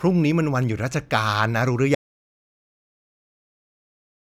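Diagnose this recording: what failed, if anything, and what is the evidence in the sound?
An audio dropout to silence cuts the speech off abruptly at 1.95 s and it never returns. The gap is silent with no room tone, unlike a noise gate or fade, pointing to the input path, likely a lost device or link while recording continued.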